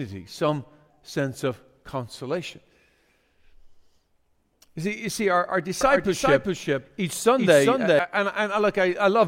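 From 5.81 to 7.99 s, right after "see our our", a doubled audio track appears: the speech runs a second time roughly 0.4 s behind itself, a few dB quieter, with no reverb tail. It most likely comes from a second, slower capture path mixed in. It sounds like a dry, stuttering echo that begins and ends abruptly. On a spectrogram the full-band pattern repeats, shifted right by a fixed gap, and the waveform envelope shows a slightly quieter duplicate of each syllable burst.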